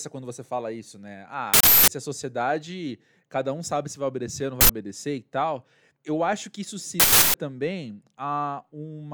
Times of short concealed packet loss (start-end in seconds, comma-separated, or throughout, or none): none